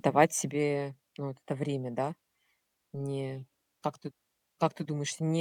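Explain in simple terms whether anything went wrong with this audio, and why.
Something went wrong: a sudden gain jump. At 0.51 s, the system that sets the digital volume likely switched to a lower setting all at once instead of easing into it gradually. As a result, the speech abruptly becomes noticeably quieter from that moment to the end of the clip, and the background noise drops by the same amount, so the whole recording steps down together rather than fading.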